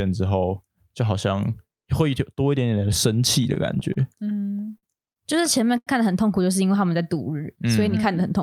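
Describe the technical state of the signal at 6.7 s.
At 6.7 s the speech is inside a jitter buffer slow-down running from 6.65 to 7.76 s. The receiver's buffer ran short, so it rebuilt its reserve by repeating single pitch periods, adding 94 ms and playing the stretch at 92% speed. Pitch stays the same while sounds are drawn out. On a spectrogram the harmonics keep their frequencies but extend in time. The waveform shows runs of identical, repeated pitch cycles.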